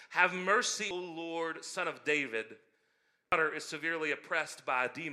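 At 3.32 s, damaged data in the compressed stream makes the decoder misread a frame and lose sync, leaving a brief chirp, click or hole in the speech.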